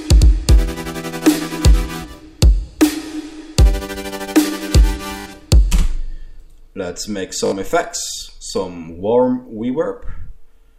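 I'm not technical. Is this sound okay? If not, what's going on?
No. At 5.2 s and again at 7.46 s there is a repeated buffer: the player ran out of fresh audio and replayed the last 20 ms slice three more times, so you hear a quick buzzy stutter rather than silence. Each hiccup skips a little under a tenth of a second.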